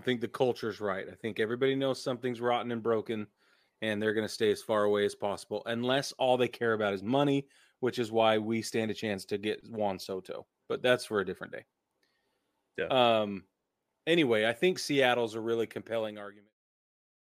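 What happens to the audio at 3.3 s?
At 3.3 s the speech runs on intact, with no fault at that point.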